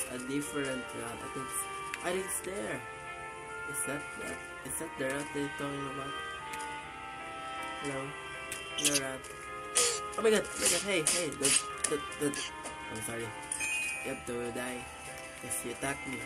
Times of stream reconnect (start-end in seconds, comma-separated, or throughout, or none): none